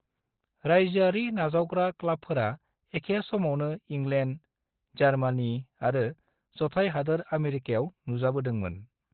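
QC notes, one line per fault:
Throughout, Opus compression: the speech is heavily degraded and band-limited, with nothing above about 4.3 kHz, so it sounds muffled, boxy and hoarse, with a telephone-like narrowness. This is likely an Opus encode at a very low rate, consistent with about 12 kbps, where the encoder drops to its narrowband speech (SILK) mode. That mode models the voice with a predictive filter and excitation rather than keeping full spectral detail, which produces the rasp.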